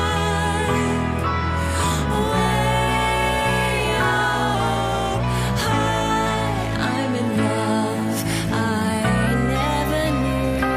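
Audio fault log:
4.55 to 5.20 s, drift correction step: playback abruptly slows by 6.34 percent and pitch drops about 113 cents, just over a semitone, then snaps back. The likely cause is clock-matching software changing the playback rate to refill its buffer. On a spectrogram, harmonics step down together and return; the waveform looks briefly stretched.
9.27 to 10.76 s, drift correction step: the reverse jump, 6.34 percent faster and about 106 cents sharp, running to the end. Harmonics step up and the waveform looks compressed.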